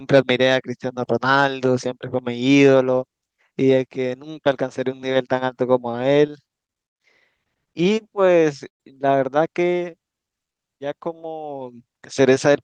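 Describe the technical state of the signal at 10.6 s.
At 10.6 s the signal is inside a jitter buffer slow-down running from about 9.90 to 10.97 s. The receiver's buffer was short of reserve, so it stretched the audio by repeating single pitch periods and slices of pauses over and over, adding roughly 126 ms. Playback drops to about 89% speed while pitch stays put, so the speech sounds drawn out and sluggish through this stretch.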